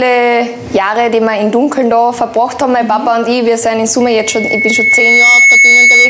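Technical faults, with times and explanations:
Throughout, gain pumping: the level swings by about 5 dB, pressing loud and soft parts close together. The likely cause is gain set far too high, with a fast limiter hauling it down on every peak.
4.01 to 6.10 s, loudspeaker feedback squeal: a single 2.2 kHz tone grows over roughly a second and a half to about 10 dB above the sound. The microphone picks up its own loudspeaker, and loop gain above one at that frequency keeps it building.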